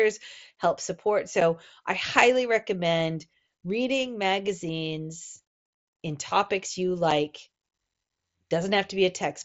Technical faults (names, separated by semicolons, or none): unconcealed Bluetooth headset packet loss